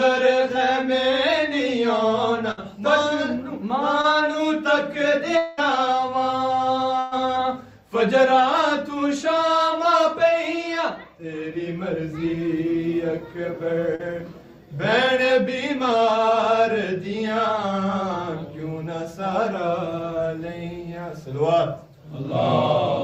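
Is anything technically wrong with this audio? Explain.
Yes, the stream shows packet-loss damage of three kinds.

Burst of packet loss at 2.51 to 2.59 s and 6.99 to 7.13 s: consecutive packets failed to arrive, so the decoder extended the preceding sound for about 60 ms and 120 ms, fading it down. The result is a held, decaying buzz or hiss, after which the audio resumes with that stretch missing.

Short concealed packet loss at 4.01 to 4.05 s and 13.95 to 14.01 s: roughly 20 ms and 40 ms of data missed the decoder's deadline. The receiver synthesised a continuation of the prior sound and crossfaded back, heard as a brief smear or wobble.

Long network dropout at 5.37 to 5.59 s: about 200 ms is replaced by an extrapolated tail of the previous sound that decays without ever reaching silence, then the audio jumps ahead. This is likely caused by a network stall in which nothing arrived for that interval.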